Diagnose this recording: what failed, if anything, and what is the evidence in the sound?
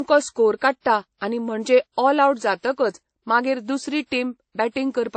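The codec stage failed: this speech has nothing above 8.3 kHz throughout, with layered codec artefacts heard together, likely transcoding between lossy codecs, consistent with a low-bitrate MP3 re-encoded as WMA. On a spectrogram the top stops flat at 8.3 kHz, with blotchy, patchy upper bands.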